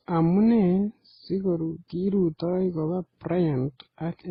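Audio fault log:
throughout: transcoding between lossy codecs, the likely cause. Nothing is heard above 13.9 kHz. The different codecs' artefacts are heard together, which points to low-bitrate MP3 and HE-AAC stages re-encoded into Opus, with each encoder keeping the earlier damage.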